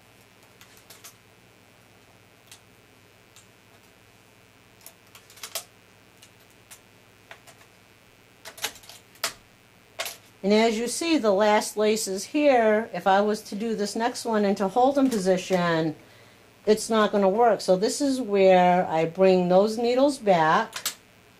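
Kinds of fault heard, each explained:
Mains buzz: Sharp switching spikes from a dimmer, rectifier or poorly shielded line leak into the signal path twice per 60 Hz cycle, spraying harmonics up into the kilohertz range. The result is a steady, raspy buzz running throughout, sitting roughly 40 dB below the signal.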